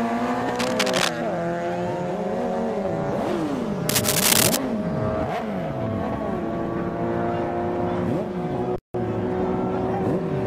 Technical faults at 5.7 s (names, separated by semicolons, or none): none